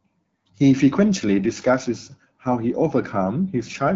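No faults are audible in the speech; it passes through the AMR wideband (HD Voice) codec at 12.65 kbit/s, which leaves only light coding damage and the codec's usual top end near 7 kHz.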